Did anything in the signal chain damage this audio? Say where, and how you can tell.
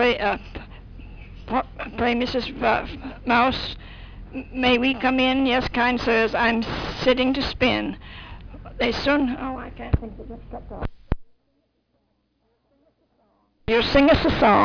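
No, nothing in the signal chain damaged this audio.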